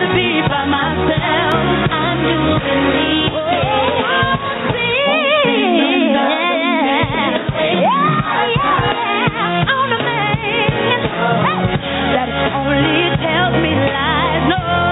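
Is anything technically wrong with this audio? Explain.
Yes, two faults are audible.

Throughout the clip there is gain pumping, likely from input gain set too high and a fast limiter or compressor reacting to each loud sound. Level swings by about 5 dB. A waveform shows a squashed envelope with breathing between peaks.

At 1.52 s there is a dropped buffer (overrun). The audio skips ahead by a millisecond or two, likely because samples were overwritten before being read. It is heard as a jump in the sound. The waveform shows an abrupt discontinuity, and a spectrogram shows a thin vertical broadband line.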